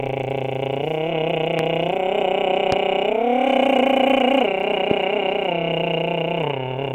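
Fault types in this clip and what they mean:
Loud pop: three sharp, single pops land on the music at about 1.6, 2.7 and 4.9 s. Each lasts only a couple of hundredths of a second and jumps well above the music, the middle one hardest. Likely a brief voltage spike; the music carries on underneath.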